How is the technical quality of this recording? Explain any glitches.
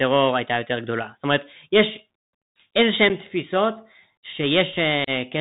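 The technical quality is poor: the whole recording has passed through a narrowband Bluetooth link, and two brief dropouts break the speech.

The Bluetooth CVSD headset codec shapes the entire clip. Its 64 kbps one-bit delta coding, with an adaptive step size, cuts everything above 4 kHz, roughens sibilants and lays granular hiss underneath. A spectrogram shows a hard ceiling at 4 kHz and a speckled noise floor.

Unconcealed Bluetooth headset packet loss occurs at 3.09 s, where about 7.5 ms of audio is missing, roughly a single packet, and at 5.04–5.10 s, where about 30 ms goes, a few packets. The gaps are filled with nothing, so the speech cuts out and then returns briefly quieter. Both show as sharp-edged vertical blank strips.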